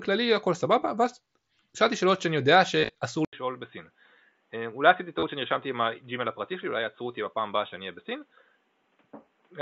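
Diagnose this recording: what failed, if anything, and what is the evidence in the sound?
Concealed Bluetooth headset packet loss is the first fault, at the wireless link between headset and phone. From 2.79 to 2.90 s, about 100 ms of audio is missing, spread across 150 ms. The longest gap lasts 37.5 ms. A second, shorter loss of 30 ms falls at 5.19 to 5.23 s. The receiver fills each gap by repeating the best-matching recent stretch of waveform. That gives a brief buzzy, held tone, then a small warble as real speech resumes.

The input switched to a poorer device at 3.25 s, most likely at the driver or device-routing stage. There is a silence of 80 ms at the switch. From then to the end, nothing passes above 3.8 kHz. Speech turns dull and boxy against the wideband mSBC sound before it. The level drops by a few decibels, and a new, faint background noise appears well below the speech. The cutoff points to a narrowband headset call profile or another microphone.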